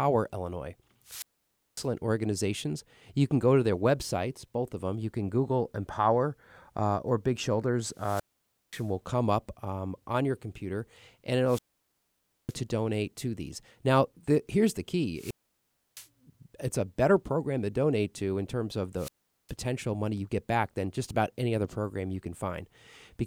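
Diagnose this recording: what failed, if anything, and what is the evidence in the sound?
Wireless microphone squelch dropouts occur in the analogue radio link, before conversion. At 1.04–1.88, 7.92–8.91, 11.44–12.56, 15.14–16.08 and 18.95–19.53 s the RF signal fades, hiss swells, then the receiver's squelch mutes for 0.41 to 0.90 s. Network packet loss would cut cleanly, without that rising static.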